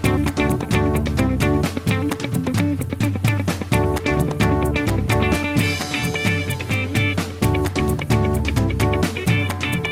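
No technical faults can be heard anywhere in the recording, and the signal holds steady throughout.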